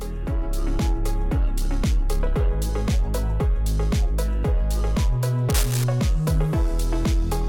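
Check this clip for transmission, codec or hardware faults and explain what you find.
One hardware fault is present. From 5.50 to 5.84 s, cable scratch noise: uneven rustling bursts roughly 10 dB under the sound, likely a worn connector shifting and rapidly varying its contact resistance.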